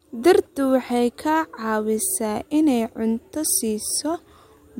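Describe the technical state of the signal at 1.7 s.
At 1.7 s the speech plays through cleanly, with no dropout, click, distortion or other fault.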